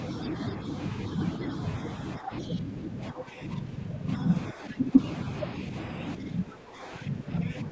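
At 0.25 to 0.29 s and 0.48 to 0.52 s, brief scraps of a second voice sit about 15 dB below the speech. This is other side's voice leaking through. It likely comes from loudspeaker echo that the canceller failed to remove.

From 2.19 to 4.09 s the speech dips and thins in pieces, by up to roughly 10 dB. This is speech suppressed in double talk. The canceller likely took the talker for echo while both sides spoke. Inside that stretch, at 2.42 to 2.46 s, another faint echo scrap leaks through, much lower, around 25 dB down.

The same suppression returns at 4.53 to 4.94 s and from 6.16 s to the end. The voice drops by around 10 dB and loses its high end.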